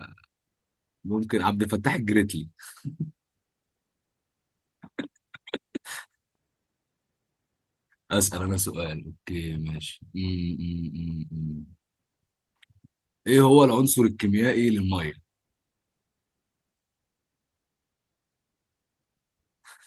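No technical faults can be heard anywhere in the recording.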